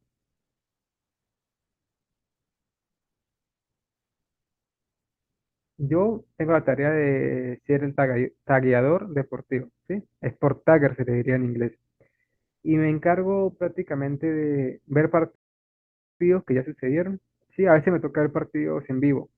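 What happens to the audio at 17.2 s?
Nothing goes wrong at 17.2 s: the audio plays through that moment intact, with no dropout, click, distortion or other fault.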